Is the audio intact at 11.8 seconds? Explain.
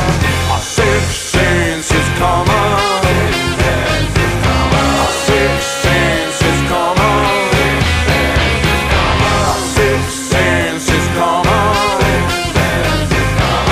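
Yes, the audio at 11.8 seconds is intact, with no dropout, glitch, clipping or other technical fault at that moment.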